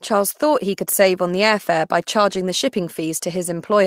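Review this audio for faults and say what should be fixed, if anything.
Two short patches of lost packet rebuilt from error correction occur, at 1.03–1.05 s and 2.33–2.35 s. Each lasts about 20 ms, which fits one dropped packet. There is no silence. The following packet carried a low-bitrate spare copy, and the decoder played that instead. So each patch of speech sounds briefly rougher and noisier than its surroundings. To prevent this, reduce packet loss on the network path, for example with a more stable connection.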